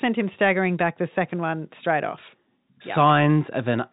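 The speech arrives over ordinary G.711 telephone coding, its content stopping at about 3.8 kHz as that narrowband format requires, and no technical fault can be heard anywhere in it.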